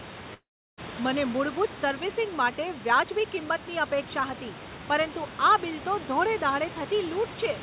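Right from the start, 0.0 to 3.9 s, there's overdone noise removal. The suppressor was pushed too hard, pulling individual frequency bands down whenever they sat near its noise estimate. The background drops with little twinkling specks, and quiet parts of the speech get eaten.

Inside that stretch, from 0.34 to 0.79 s, the sound breaks off: a fading buzz stands in for a while before about 340 ms of silence, then it picks up further on with roughly 440 ms gone. That's most likely a long network dropout, with the receiver padding the gap.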